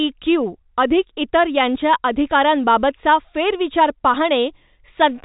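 Speech carried over G.711 mu-law telephone coding, band-limited below 4 kHz as that path always is, with no technical fault present.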